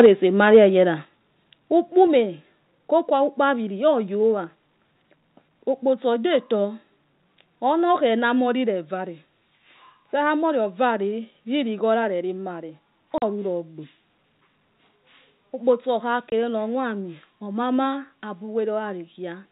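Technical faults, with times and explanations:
0.0–0.06 s and 0.54–0.58 s, microphone overload: input gain likely set too high drove peaks about 3 dB and 2 dB past the converter's limit, flattening their tops into a harsh crackle.
0.06, 1.05, 2.07 and 8.19 s, microphone volume stepped down: software likely cut input gain in single steps of 4, 5, 3 and 2 dB, so the level drops abruptly each time.
13.18–13.22 s and 16.30–16.32 s, packet loss filled with silence: lost audio was replaced by 40 ms and 20 ms of dead silence, fitting 20 ms packets, leaving hard-edged gaps in the speech.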